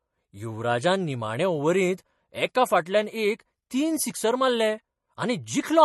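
Speech throughout the clip carries MP3 compression damage, likely from encoding at a low bitrate of around 40 kbps. Starved of bits, the encoder has removed everything above 12.1 kHz, dulling the top end, and drops weak frequency lines frame to frame, giving plainly audible watery, swirling artefacts.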